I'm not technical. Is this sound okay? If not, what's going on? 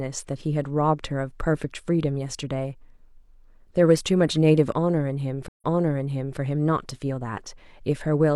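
No, there's a stream reconnect at about 5.48 s: the connection dropped, the sound cuts out for about 0.11 s, then picks back up about 0.79 s earlier, so you hear a short bit of speech again. The glitch settles by 6.39 s.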